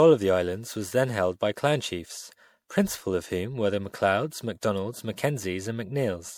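From start to finish the speech carries generation loss, most likely from being run through MP3 at around 96 kbit/s about four times. Each re-encode quantised it again on a shifted frame grid, so the errors stacked up. The result sounds swirly, hollow and smeared, with blurred consonant attacks. On a spectrogram the upper bands look patchy and holed, with flickering blocks. In the waveform, transients look softened and spread.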